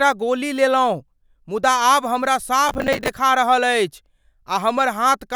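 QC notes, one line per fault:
2.69–3.08 s, processor overload crackle: just after "मुदा आब हमरा" a gritty tearing rides on the speech. The processor kept missing deadlines, and each late slot was filled with stale audio joined by hard edges. The grain fits buffers of roughly 10 ms, about twenty missed over the stretch. Unlike clipping, it doesn't track loudness, and unlike packet-loss dropouts it leaves no silent holes. It stops once the load passes.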